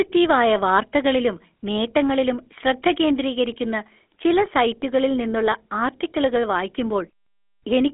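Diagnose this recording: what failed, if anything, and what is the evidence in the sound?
Codec stage: the GSM full-rate codec is audible throughout. Beyond the 250 Hz to 3.4 kHz telephone band, the speech carries a buzzy, gravelly roughness from sparse pulse excitation, consistent with roughly 13 kbps, unlike clean band-limiting.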